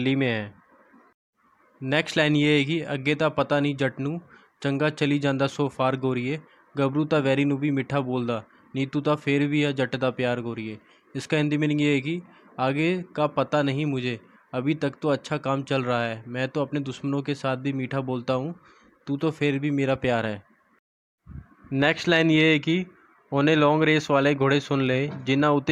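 No technical fault can be heard anywhere in this audio. Every part of the sound comes through without any problem that points to a cause in the recording or playback chain.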